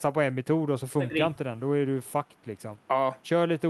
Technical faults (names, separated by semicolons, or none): none